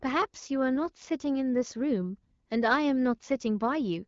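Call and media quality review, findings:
No faults found; the speech band stops near 7 kHz with clear articulation, consistent with the AMR wideband (HD Voice) codec working normally at a rate around 12.65 kbit/s.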